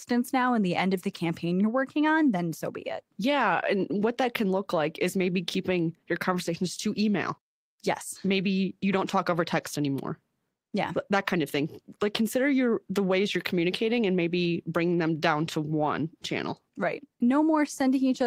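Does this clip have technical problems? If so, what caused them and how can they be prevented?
No, no technical faults here.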